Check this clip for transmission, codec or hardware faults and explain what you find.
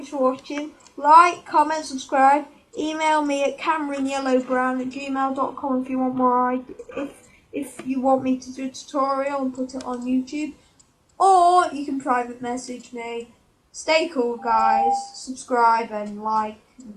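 Two faults stand out, one from the delivery chain and one from the acoustic setup.

From 3.89 to 7.89 s the adaptive stream drops to a lower bitrate. The connection evidently slowed, and the player switched to a leaner encoding, which fits a move from AAC-LC at 96 kbit/s to HE-AAC at 20 kbit/s. Quality changes abruptly with no gap, codec artefacts rise, and nothing above 14.5 kHz is present.

From 14.38 to 15.23 s there's a loudspeaker feedback squeal. The mic is hearing the speaker it drives, and at 797 Hz the loop gain tops one, so that tone feeds on itself. It swells over roughly a third of a second to around 5 dB above the rest of the sound.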